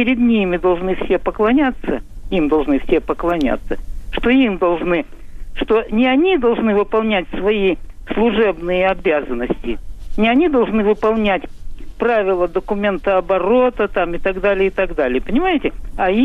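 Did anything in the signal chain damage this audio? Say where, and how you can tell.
No, nothing in the signal chain damaged this audio.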